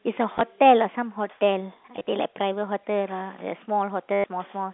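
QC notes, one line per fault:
0.33–0.41 s and 1.97–2.07 s: packet loss with last packet repeated, about 50 ms of gaps spread over each stretch, none longer than 20 ms. You get quick hiccups where repeated chunks butt up against each other. The spacing fits 10 ms packets.
4.13–4.24 s: packet loss with last packet repeated, a solid 110 ms run. That one turns into a proper robotic buzz at about 100 Hz, with the G.711 telephone band still audible underneath.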